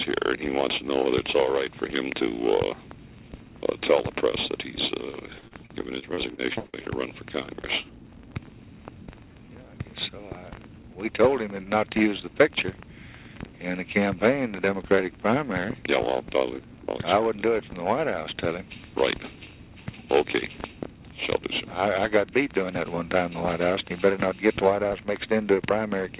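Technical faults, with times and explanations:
5.39–6.88 s, repeated packet loss (robotic sound): over this 1.5 s stretch the stream drops out again and again, with about ten holes of up to 58 ms each, adding up to roughly a quarter of the span. Each hole is bridged by extending the sound just before it, so the audio turns choppy with pieces missing. A spectrogram shows smeared, repeating bands under the 4 kHz ceiling of the call line. The waveform shows blocky, copied-looking segments with abrupt joins.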